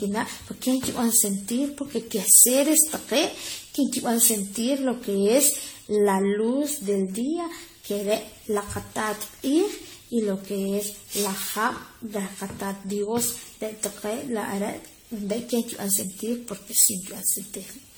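From start to finish the speech has that swirly, hollow, smeared quality of generation loss, with consonant attacks blurred. It's likely been through a lossy codec around ten times, each pass piling on fresh noise and spectral holes; the character fits AAC-LC at 64 kbit/s.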